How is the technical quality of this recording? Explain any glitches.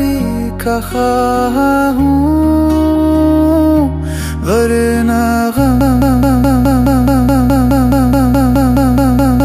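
The recording breaks down near the end with a broken-record loop. From 5.81 s to the end, the player or stream likely stalled and kept resending its last held fragment. A 211 ms slice repeats 17 times back to back as a rapid stutter, and the audio that should have followed is lost.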